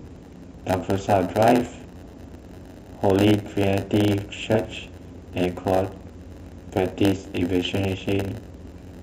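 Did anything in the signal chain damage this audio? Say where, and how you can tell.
Yes: a buffer-stage block size mismatch (padded) zero-fills each block, causing a 91.9 Hz buzz throughout the speech and slowing it to 0.919 speed with its timbre unchanged.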